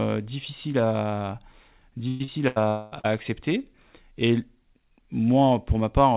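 Between 2.08 and 2.23 s a burst of packet loss leaves about 120 ms of speech undelivered. The receiver stretches the last sound across the hole, so a held buzz or fading hiss stands in for the missing audio before playback resumes further on. A second burst at 2.48 to 2.59 s does the same over about 80 ms.

Short concealed packet loss follows at 2.24 to 2.31 s and again at 3.00 to 3.07 s. Each time about 40 ms failed to reach the decoder in time and was filled by extrapolating the preceding sound, heard as a brief smear or wobble where a short sound can drop out.

From 2.68 to 2.95 s the audio is replaced for about 240 ms by a continued buzz or hiss that decays without ever falling to silence, then picks up later with that stretch gone. This is likely a long network dropout. Throughout, the G.711 mu-law call path leaves nothing above 4 kHz.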